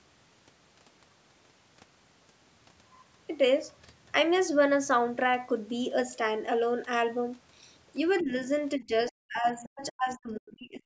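At 8.18 s, for about 60 ms until 8.24 s, a faint scrap of a second voice comes through. This is the other side's voice leaking through. It sits far below the main speech, roughly 25 dB down. It is likely loudspeaker echo that the echo canceller failed to remove fully. It is brief.

Almost at once, from 8.21 to 8.32 s, the speech dips. This is speech suppressed in double talk. The drop is modest, around 15 dB, and lasts about a tenth of a second. Both sides were likely talking at once, so the canceller could not separate the talker from the echo and turned everything down.

A much heavier case runs from 8.77 s to 10.84 s. The voice cuts out in pieces, with drops reaching around 40 dB. About one and a half seconds of that stretch is affected. The speech falls nearly silent in those gaps.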